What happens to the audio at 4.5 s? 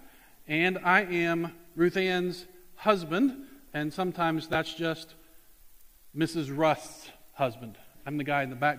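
Chunks out of order, from 4.53 to 4.55 s: a 10 ms chunk arrived one chunk late and plays after the chunk that should follow it. Nothing is missing, but the swap leaves three hard joins, heard as a tiny jumbled flicker.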